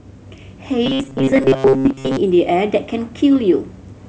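From 0.86 to 2.17 s, the speech takes on a robotic sound from repeated short buffers. The voice becomes a stiff, metallic buzz near 133 Hz. That pitch stays fixed while the words still come through roughly. A buzz at 133 Hz matches a loop of about 7.5 ms. The likely cause is new audio arriving too slowly, so each short stretch is replayed to fill the gap. Around two thirds of this section is repeated material, and the true audio there is lost.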